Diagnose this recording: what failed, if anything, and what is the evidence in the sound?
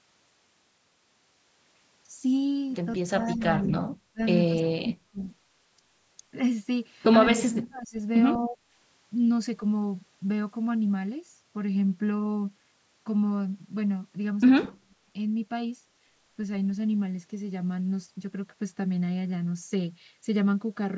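Speech suppressed in double talk, in call processing: the waveform shows notches about 15 to 40 dB deep at 3.11–3.72, 4.12–4.2, 4.48–5.21, 7.33–7.97, 8.38–8.59 and 14.64–15.07 s. The likely cause is the echo canceller ducking the talker while both sides speak.

Echo leak, in call processing: at 14.63 s a faint copy about 25 dB down arrives 209 ms late. On a spectrogram it shows as a weak delayed repeat of the speech pattern, likely loudspeaker echo that slipped past cancellation.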